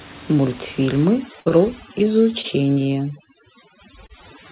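From 1.05 s to the end, a noise reduction stage set far too aggressively keeps cutting narrow frequency bands that sit close to its noise estimate, taking quieter parts of the speech with them. This is overdone noise removal: the room noise, about 20 dB below the speech, collapses into near silence sprinkled with twinkling specks.

At 1.40 s a burst of packet loss removes about 60 ms of audio. The receiver papers over roughly 57 ms of the hole by extending the last sound and fading it down, so it comes out as a held buzz or dying hiss before the speech resumes further along with that stretch gone.

Right after, from 1.49 to 1.54 s, comes a short stall from a late packet. The jitter buffer ran dry, so the last sound was stretched by 18 ms until the packet showed up, then playback carried on from the same point. Nothing is lost, but a sound lingers slightly too long with a faint buzz. A second stall at 2.41 to 2.47 s holds a sound for 26 ms in the same way.

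Short concealed packet loss follows at 2.74 to 2.79 s and again at 4.06 to 4.12 s, each dropping about 30 ms before the decoder could use it. The receiver patched the gaps by continuing the preceding sound, 23 ms and 27 ms of fill respectively, before blending back in. Each is heard as a brief smear or wobble, and a quick consonant can drop out. Throughout, the G.711 mu-law call path leaves nothing above 4 kHz.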